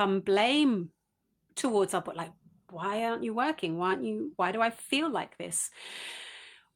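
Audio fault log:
No faults heard anywhere in this speech recording.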